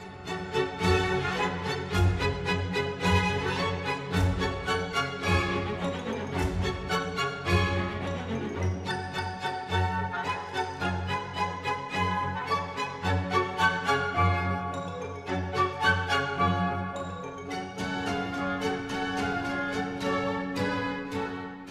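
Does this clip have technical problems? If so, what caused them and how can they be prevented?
No, no technical problems here.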